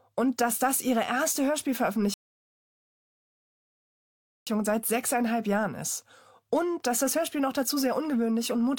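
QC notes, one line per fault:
2.14 to 4.47 s, rebuffering stall. The speech stops dead and the line goes silent for about 2.33 s. It then picks up at exactly the point where it broke off. Nothing is skipped or repeated. The player ran out of downloaded audio and had to wait for more data before it could continue. That is why the gap is pure silence rather than a glitch. The clip runs 2.33 s longer than its content.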